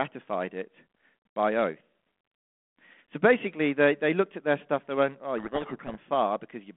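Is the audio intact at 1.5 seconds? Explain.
Yes, the audio is intact at 1.5 seconds, with the speech carried cleanly through the 32 kbit/s G.726 ADPCM telephone path and its 200 Hz to 3.4 kHz line band.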